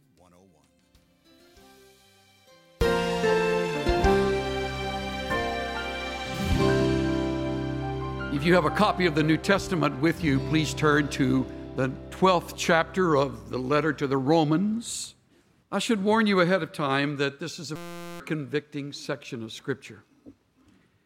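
From the start to about 2.81 s the sound is faint, roughly 32 dB down, as if the centre has been hollowed out. That's likely one channel inverted: with one side's polarity flipped, everything common to both channels cancels when they're summed to mono, leaving only the difference.

At 17.76 s a system hang loop kicks in and runs to 18.20 s. A 5.8 ms slice repeats 76 times, giving a steady buzz at about 172 Hz. That fits a 256-sample ring buffer cycling while the system froze, and around 0.4 s of real audio goes missing.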